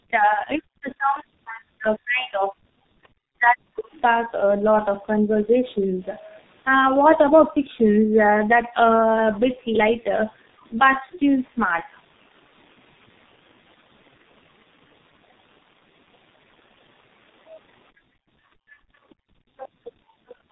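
Speech that has passed through tandem speech coding: AMR-NB and then G.723.1 coded it in turn, with G.711 between them. Nothing is left above 3.8 kHz, and the stacked coding losses make it rougher and more warbly than either codec alone would. A second voice surfaces very faintly from 3.03 to 3.08 s and somewhat louder, though still well below the speech, from 19.57 to 19.69 s. This is likely the other side's voice leaking through from a loudspeaker that echo cancellation missed.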